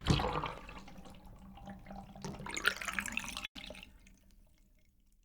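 At 0.58 to 0.60 s a loud pop, peaking a few dB above the sound, likely from an electrical pulse, shows as a sharp spike with a vertical broadband stripe on the spectrogram.

At 2.31 to 2.35 s a short concealed packet loss fills a 20 ms hole with continued sound, heard as a brief smear and seen as a slightly blurred, smoothed patch.

From 3.45 to 3.57 s a burst of packet loss replaces 100 ms with fading concealment, including 80 ms of silence, visible as a dark gap before the audio resumes further on.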